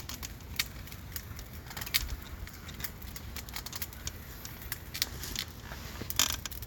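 Nothing here stands out as a technical fault, and the sound simply runs its course without a hitch anywhere along the way.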